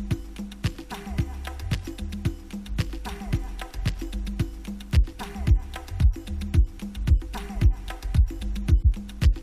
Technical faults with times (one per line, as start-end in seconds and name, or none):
none